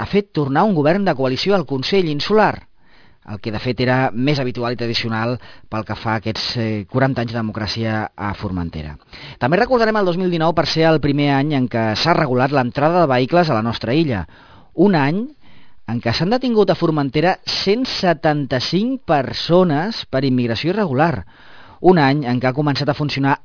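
Aliasing runs the whole way through: energy above 5.5 kHz folds back as gritty, metallic tones about 20 dB down, which fits an unfiltered drop to 11 kHz.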